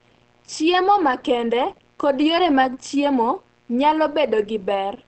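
A steady, raspy buzz runs under the speech from start to finish, faint and roughly 40 dB below it. This is mains buzz: sharp switching spikes from a dimmer, rectifier or unshielded lead, repeating twice per 60 Hz cycle and spreading harmonics well up into the kilohertz range.

Throughout, the speech also sounds muffled and hoarse, with plainly audible damage and nothing above 8.5 kHz. The likely cause is Opus compression running in its speech (SILK) mode at wideband, which fits a low bitrate of around 16 kbps that narrows the bandwidth and roughens the voice.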